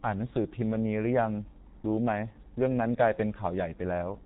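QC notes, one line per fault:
throughout G.723.1 codec: heavy low-bitrate coding, around 6.3 kbit/s, strips everything above 4 kHz and smears consonants, leaving the speech muffled and hoarse.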